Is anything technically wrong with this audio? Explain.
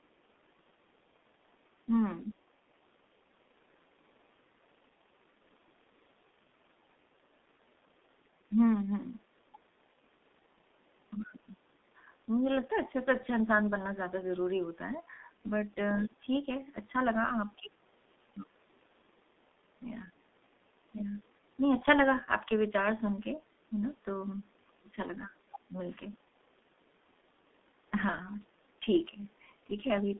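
Yes. From start to finish the speech sounds muffled and hoarse, with smeared consonants. This is heavy G.723.1 codec damage: coding at 6.3 kbit/s in 30 ms frames confines everything to 200 Hz–3.6 kHz.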